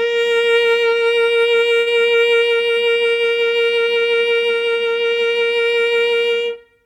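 At 1.79 s the music hits a short stall from a late packet: the jitter buffer ran dry, so the last sound was stretched by about 68 ms until the packet arrived, then playback resumed with nothing lost.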